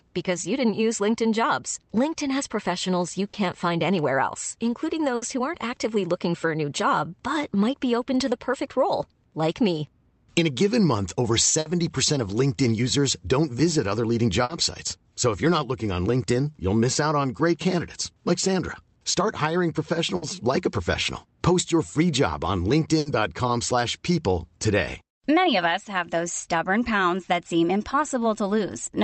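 Speech, with six short bursts of packet loss at 3.27, 5.16, 11.6, 14.44, 20.16 and 22.99 s. The first comes right after "has professionals you". Each time, about 60 ms (70 ms in the last one) is patched by stretching and fading the previous sound into a brief buzz or hiss, then about 40 ms goes missing before the audio picks up. Right after the fifth gap, from 20.71 to 21.26 s, there's a jitter buffer speed-up: the receiver trims a few tens of milliseconds of pitch periods to shrink its backlog, so the speech runs about 6% faster at unchanged pitch and feels a little rushed.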